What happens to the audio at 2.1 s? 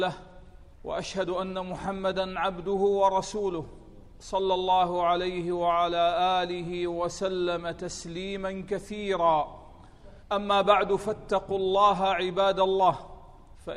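Nothing goes wrong at 2.1 s; the audio runs through that moment intact, with no dropout, click or other fault.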